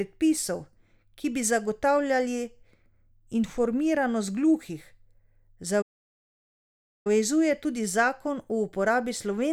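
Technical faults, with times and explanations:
5.81 to 7.07 s, playback stall: the speech cuts off mid-flow and the output falls silent for about 1.24 s before resuming. The likely cause is the player's buffer running dry or its output thread being blocked, leaving nothing to send until it recovered.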